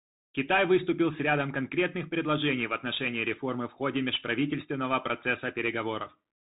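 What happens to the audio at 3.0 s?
At 3.0 s the speech sounds narrow and muffled, with nothing above 3.8 kHz, scratchy s sounds and a granular hiss underneath. This is the Bluetooth CVSD headset codec, present throughout the clip. It codes audio as one-bit up-or-down steps, consistent with a 64 kbps stream.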